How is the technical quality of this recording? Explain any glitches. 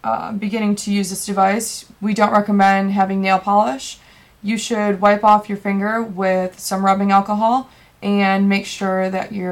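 The recording has a recurring hard clipping problem in three spots: 2.22 to 3.59 s, 5.05 to 5.35 s, and 6.88 to 7.18 s. Something in the chain got pushed past its ceiling, by about 4 dB, then about 3 dB, then about 2 dB, so the waveform peaks were sheared flat. Those squared-off tops throw extra harmonics way up high, and you hear a gritty crackle riding the loud moments, harshest in that first, longest stretch.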